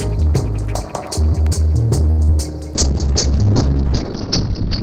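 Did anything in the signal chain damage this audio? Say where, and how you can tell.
Yes. The first fault sits in the network and jitter buffer stage. It is a short stall from a late packet, from 2.10 to 2.19 s. A packet arrived late and the buffer ran dry. The receiver held the last sound for 76 ms until the packet came, then resumed from the same point. Nothing is lost. Instead, a sound stretches unnaturally long, and the playout delay grows by 76 ms from there on.

The second fault is also a network problem: a short concealed packet loss at 2.25 to 2.29 s. About 30 ms of audio never reached the decoder in time. The decoder filled the gap by extending the preceding sound for about 29 ms, then blended back into the real signal. You hear it as a brief smear or wobble. A short sound inside that window can disappear.

The third fault is a call bitrate drop starting at 2.76 s and lasting to the end. 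The bandwidth estimate fell, and the codec was pushed from 32 kbps down to 7 kbps. It sits at the lowest rate for about 1.6 s. The coding turns coarse, and the audio band shrinks from 20 kHz to 4 kHz. The top end disappears, and the sound becomes muffled and rough. It does not recover before the clip finishes.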